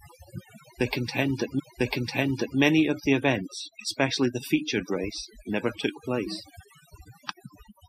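The whole clip has overdone noise removal on it. The reducer was pushed too hard, so any frequency band that sits close to its idea of the noise gets pulled way down or shut off, and the softer parts of the speech get taken along with it. You end up with a background that drops away and breaks up into little twinkly, warbling specks.

Then from 1.58 to 2.58 s there's a stream segment repeated. The player grabbed or queued the same chunk twice, so roughly a second of the speech plays through and then plays again, adding close to a full second to the running time. Listen for a small blip right where it jumps back to the start of that chunk; that's the seam between the two copies.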